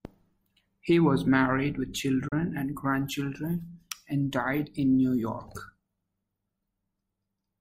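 Speech, interrupted once by a digital broadcast dropout from 2.28 to 2.33 s: the sound fades to silence over about 8 ms and stays muted for roughly 32 ms before returning. The short, clean gap is consistent with the receiver muting over a single corrupted or lost frame, so that stretch of speech is gone.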